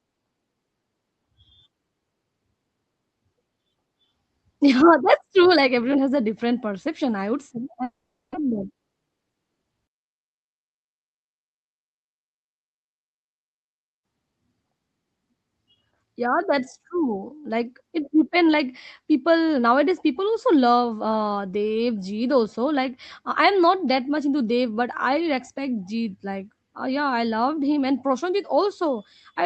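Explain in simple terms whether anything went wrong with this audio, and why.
Two things go wrong. From 7.83 to 8.36 s there's a long network dropout, likely. The sound smears into a fading buzz, then goes silent, and that bit never comes back.

Right after, from 8.45 to 9.31 s, a jitter buffer speed-up plays the speech about 10% faster at normal pitch, trimming roughly a tenth of a second to catch up.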